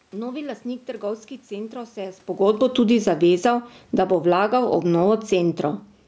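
From 2.26 to 4.43 s, automatic gain falling pulls the level down about 13 dB. Unlike the talker moving back, the room noise sinks along with the speech.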